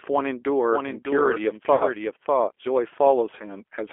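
A speech recording carried through the G.729 codec, with two short dropouts patched over by that codec's packet loss concealment. The G.729 coding runs the whole way through. The voice sits in a telephone band of roughly 300 Hz to 3.4 kHz and sounds slightly rough and synthetic, the plainly audible texture of a codec that rebuilds speech from a vocal tract filter, a pitch predictor and a few pulses per frame, which fits an 8 kbit/s coder. On a spectrogram everything above 3.4 kHz is empty, the low end is trimmed below 300 Hz, and harmonics look smeared and grainy rather than clean. The first VoIP packet loss concealed by the speech codec runs from 1.75 to 1.84 s. The decoder stretches its last pitch and filter into a buzzy tone or coloured noise that fades, which fits about five lost 10 ms frames, and the voice stays weak briefly after audio returns. The second, from 3.39 to 3.44 s, is a single brief smear that fits one lost frame. 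In the waveform both appear as envelopes decaying smoothly rather than dropping to silence, and the spectrogram shows frozen, repeated harmonic stripes fading out.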